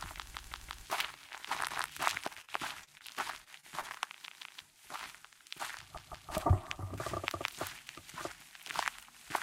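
A recording of everyday sounds with two kinds of dropout. Repeated buffer stutters occur at 0.34–0.85 s, 1.71–1.88 s, 4.27–4.61 s, 5.97–6.32 s and 7.34–7.51 s. A 171 ms chunk replays with hard joins, which fits an 8192-sample buffer. Repeated packet loss gives choppy, robotic sound at 2.19–3.02 s and 3.44–4.02 s. Short gaps of up to 33 ms are patched by stretching the previous sound.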